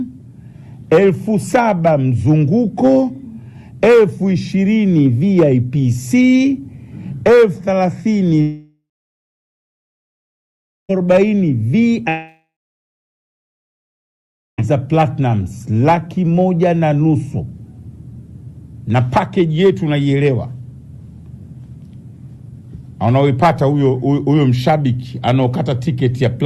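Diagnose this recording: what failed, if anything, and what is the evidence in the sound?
Two holes, 8.41 to 10.91 s and 12.09 to 14.60 s: the last sound smears into a fading buzz for a few tenths of a second, then about 2 s of silence, and it resumes with that stretch lost. Likely a long network dropout, concealment giving up.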